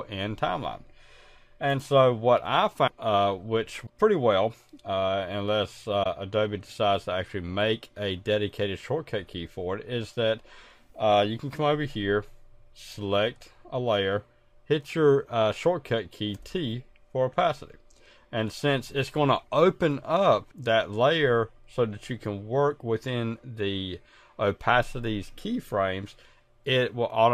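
Three short disturbances occur at 2.86 s (about 30 ms), 3.85 s (about 40 ms) and 6.02 s (about 40 ms). At each, the audio skips forward and the next stretch decodes as garbage. The likely cause is a broken MP3 bit reservoir: frames were lost, so the following frame's backward pointer lands on bytes from an unrelated frame. Each event spans one to two frames of roughly 26 ms, which fits standard MP3 framing.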